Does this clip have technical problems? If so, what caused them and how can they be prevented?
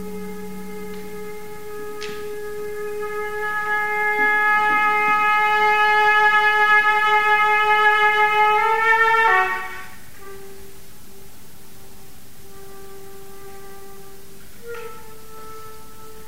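No, the signal holds steady throughout with no audible technical faults, so there is nothing here that calls for a cause or a preventive fix.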